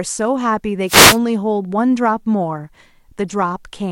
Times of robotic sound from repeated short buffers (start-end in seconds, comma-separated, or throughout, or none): none